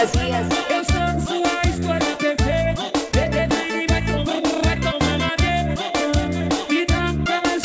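No technical faults are audible.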